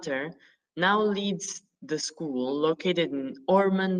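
At 0.87 s, just before "leads the school", a lost packet rebuilt from error correction briefly roughens the speech. About 20 ms of audio, consistent with a single dropped packet, is filled from the low-bitrate copy carried in the next Opus packet, so there is no gap, only a grainier, noisier moment.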